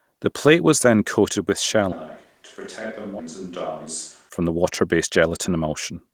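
After "was then coated with", from 1.92 to 4.29 s, the sound turns roomy and thin, about 10 dB quieter, with room noise about 30 dB below speech, likely a switch to a distant microphone. At 3.19 to 3.21 s a skip ahead drops roughly a second of audio, with no fill, and the two sides are joined almost directly. From 4.41 to 6.12 s a jitter buffer speed-up plays the audio at 109% speed with unchanged pitch, trimming around 150 ms of pitch periods to cut the delay. The result sounds hurried.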